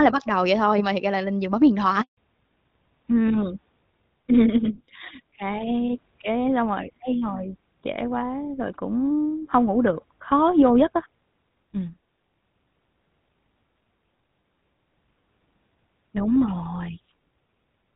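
At 2.01 s, right after "lên giường bấm điện", the speech cuts out completely for 160 ms, until 2.17 s. This is a handover gap: while the call was passed from one network to another, no speech frames got through, so the sound fades within a few tens of milliseconds and leaves true silence. Unlike a lost packet that a codec might smooth over, nothing is patched in, and what was said in that stretch is simply gone.

From 2.17 s to the end, the call falls back to narrowband. Before the gap, the audio has the light coding texture of HD Voice, which fits AMR-WB at 12.65 kbit/s. Afterwards, everything above 4 kHz is missing, which points to the GSM full rate codec at 13 kbit/s, so the speech turns duller and rougher. What sets this apart from a gradual bandwidth squeeze is that the loss is sudden and permanent, and it begins exactly where the handover silence ends.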